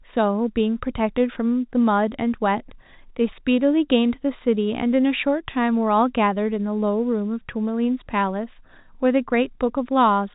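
No technical faults are audible in this speech; the G.711 telephone coding it passes through shows only as the expected cut-off near 4 kHz and a faint quantisation hiss that rises and falls with the level.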